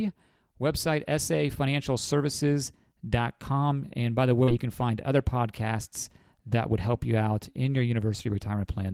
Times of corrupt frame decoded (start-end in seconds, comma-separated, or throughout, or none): none